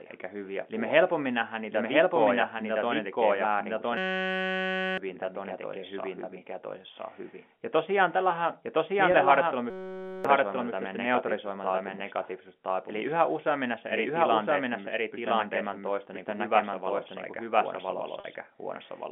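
Throughout, the speech is heard twice. A doubled audio track runs underneath. The copy trails by about one second at roughly equal level. It is full-band and dry, with no room colour. Likely cause: a second, slower capture path mixed back in.

From 3.97 to 4.98 s, a system hang loop takes over. The machine froze while the sound hardware kept replaying one 5.33 ms slice. That fits a 256-sample buffer. It repeats at 188 Hz as a steady buzz. About a second of speech is lost.

At 9.12 to 9.14 s comes packet loss with pitch repetition. One 20 ms gap was bridged by repeating the last pitch period. It sounds like a brief, slightly held buzzy tone.

From 9.70 to 10.25 s the hang loop returns. The same 5.33 ms slice cycles at 188 Hz, again a steady buzz. About half a second of speech disappears.

At 18.20 to 18.24 s the packet loss recurs, now 40 ms long. The repeated pitch period holds and fades a little before the speech resumes. 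All of this arrives through a telephone-band line, roughly 200 Hz to 3.5 kHz.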